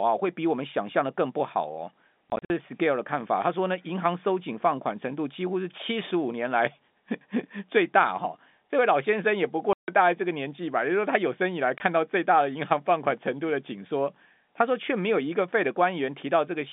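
Packet loss filled with silence leaves hard-edged holes at 2.3–2.5 s, 9.73–9.88 s and 11.78–11.80 s. They show as flat waveform gaps and blank spectrogram columns.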